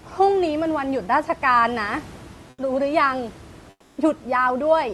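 At 2.50 to 2.58 s and 3.70 to 3.97 s, comfort noise replaces the room background: a flat, textureless hiss about 7 to 8 dB quieter, likely from the sender's discontinuous transmission. Unlike a gate, the pause never falls fully silent.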